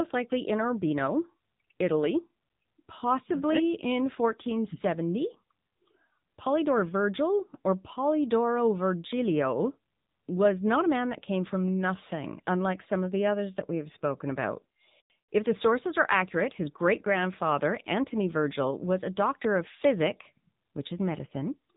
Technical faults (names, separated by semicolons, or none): AMR narrowband mobile codec